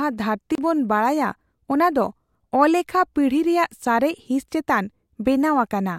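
At 0.55 s a block of digital silence cuts in for about 29 ms, ending at 0.58 s, just before "ᱵᱚᱱ ᱵᱟᱰᱟᱭᱟ ᱚᱱᱟ ᱫᱚ". Samples were replaced by zeros. The speech drops out abruptly with no fade. It is heard as a brief pop-like hole.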